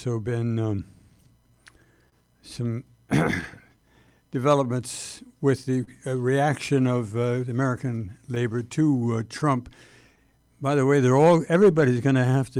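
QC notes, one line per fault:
Throughout: clock drift between sender and receiver. The sender's clock runs roughly 3% slow against the receiver's, so the jitter buffer keeps draining and the receiver has to keep nudging the timing, which is why small hiccups turn up unevenly across the clip.
0.12 to 12.32 s: repeated timing corrections. To cover the slow sender, the receiver keeps repeating short slivers, stretching things to about 99% speed and adding something like a fifth of a second overall. You hear it as a slightly unsteady, dragging tempo.
2.09 to 2.14 s: short stall from a late packet. A packet showed up late, the buffer ran dry, and the receiver held the last sound for 29 ms until it arrived. Nothing is lost, but that moment hangs briefly with a faint buzz or dip.
3.41 to 5.89 s and 8.35 to 11.84 s: scattered short gaps. Roughly seven late or lost packets in the first stretch and five in the second got patched by extending the previous sound, each 30 ms or less. 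The result is brief ticks and smears rather than dropouts.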